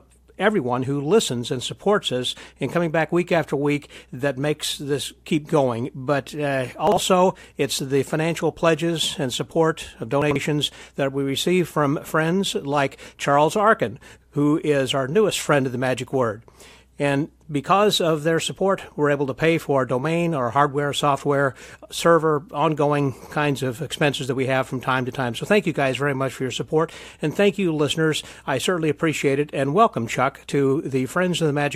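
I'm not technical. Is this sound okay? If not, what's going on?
No, there are three quick glitches where chunks play out of order, at about 6.87–6.97 s, 10.22–10.36 s and 23.22–23.31 s. A tiny slice, roughly 46 ms, arrived late and plays after the bit or two that should follow it, so each spot sounds briefly jumbled.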